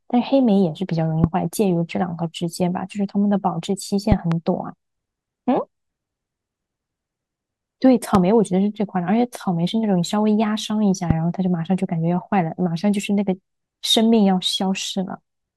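Loud pops strike at 1.24 to 1.26 s, 4.12 to 4.34 s (a double), 8.15 to 8.17 s and 11.10 to 11.13 s. Each is a sharp thump well above the speech, which continues beneath. A voltage spike, likely from a switch or static, is the cause.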